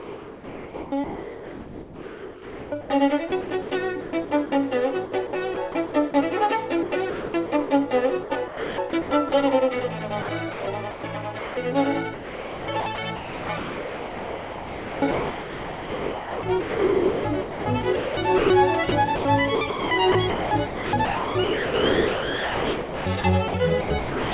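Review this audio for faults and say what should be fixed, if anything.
The sender's voice detector was likely switching transmission on and off, filling each gap with comfort noise. This happens at 0.00–4.52, 5.06–6.14, 6.83–7.70, 8.24–9.32, 10.22–11.57 and from 12.14 s to the end. Sound is replaced for 0.27 s to about 8.3 s at a time, so the audio is choppy within the 4 kHz band of the call path.

To prevent this, disable sender-side voice detection or lower its threshold and lengthen its hangover time.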